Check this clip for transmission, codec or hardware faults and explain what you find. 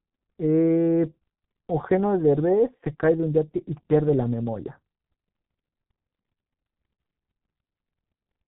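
The speech carries one fault, present for the whole clip: heavy G.723.1 codec damage. The band stops at 4 kHz, and the voice comes out muffled and hoarse, with smeared consonants, which fits a 6.3 kbit/s stream. The codec squeezes each 30 ms frame into a coarse voice model that updates slowly, so fast articulation blurs and the voice turns hoarse. A plain low-pass filter would dull the sound without that hoarse, frame-paced smearing.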